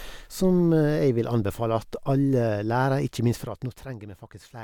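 A gain change in this speech clip is applied in coarse 2 dB steps with no smoothing, at around fifteen steps a second. From 3.24 to 3.96 s the level drops by roughly 15 dB, and each jump adds a small click, heard as zipper noise ticking over the fade.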